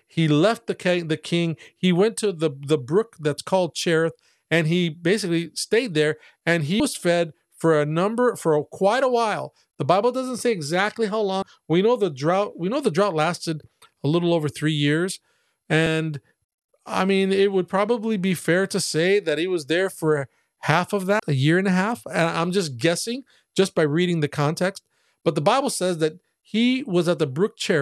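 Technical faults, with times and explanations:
6.79 s, 11.42 s, 15.86 s and 21.19 s, compressed frames skipped: the speech jumps forward at each point, dropping about 100 ms, 70 ms, 150 ms and 200 ms of audio respectively. Each gap fits a small whole number of 26.1 ms frames that the decoder never played. Overlapping neighbour frames blend across the join, so each skip is a short smeared blip rather than a sharp click.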